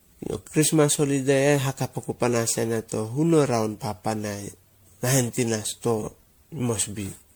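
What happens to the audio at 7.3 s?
Generation loss, present through the whole clip including 7.3 s, sounds swirly, hollow and smeared, with blurred attacks. Likely caused by repeated MP3 re-encoding, around ten passes, consistent with roughly 96 kbit/s. A spectrogram shows patchy, flickering holes and smeared onsets.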